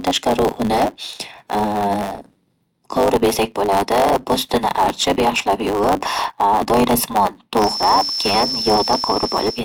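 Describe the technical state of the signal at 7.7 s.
At 7.7 s two faults overlap. The first is a block size mismatch with truncation, present through the whole clip. One stage hands on longer blocks than the next stage takes in, so the tail of every block is dropped. Those regular cuts produce a buzz at 100 Hz. The speech runs about 1.09 times fast, yet its pitch stays close to normal, because material is skipped rather than resampled.

The second fault is a thin, steady whistle at 5.4 kHz. It starts at 7.53 s and lasts to the end of the clip. It sits only a little below the speech and swells and fades slowly in level. This is likely a feedback whistle. The loudspeaker-to-microphone loop is poised at the edge of feedback, so one high frequency keeps ringing without building up into a howl.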